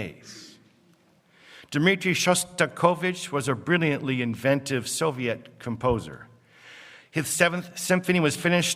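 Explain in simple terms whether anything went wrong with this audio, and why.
Nothing went wrong that I could hear; the audio sounded steady and natural all the way through, with no glitches, dropouts or odd noises standing out.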